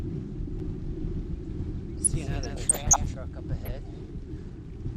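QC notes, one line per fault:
Throughout: MP2 compression. The whole clip sounds dull, with a gurgling, granular grain, likely from Layer II coding at a low rate, which fits about 80 kbps. Spectrogram shows upper sub-bands blinking on and off, leaving a ragged, stepped top edge.
0.6–3.14 s: doubled audio track. A second full-band copy trails the original by roughly 150 ms at roughly 5 dB lower, likely from a slower duplicate capture path. It starts and stops abruptly without reverberant tail, visible as every onset repeated once, slightly fainter.
1.98–2.98 s and 3.65 s: DAB burbling. Bit errors slipping into the MP2 frames throw single sub-bands briefly to wrong levels, giving short blips of noise over the sound. The spectrogram shows isolated rectangular blocks flaring bright for up to a frame each, scattered across bands.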